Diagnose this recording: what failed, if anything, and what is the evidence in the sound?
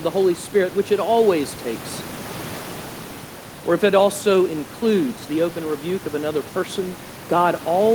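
Nothing in the signal chain has failed: the speech sits steadily above a low background of room noise, about 19 dB below it, which belongs to the space the microphone was in rather than to any stage of the system.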